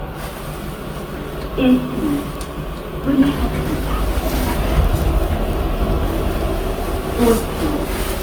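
Throughout the clip the sound has a swirly, smeared, hollow quality, with transients blurred, sounding worse than a single lossy pass would explain. This is most likely generation loss: the audio appears to have been decoded and re-encoded about four times, with the character pointing to Opus at around 48 kbit/s. Each pass requantises on a shifted frame grid, so the noise accumulates. Nothing is present above 20.2 kHz.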